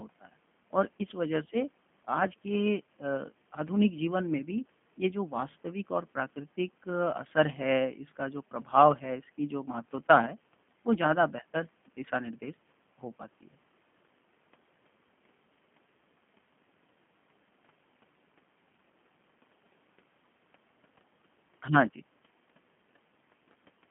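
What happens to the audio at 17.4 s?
At 17.4 s the speech carries the same G.729 codec colouring heard across the entire clip, not a separate event. The codec resynthesises each short frame from a vocal-tract filter, a pitch predictor and a sparse pulse excitation, which fits an 8 kbit/s G.729A stream. The result is plainly rough and slightly synthetic. The band is confined to roughly 150 Hz to 3.4 kHz, so nothing above 3.4 kHz survives, leaving the sound narrow and telephone-like.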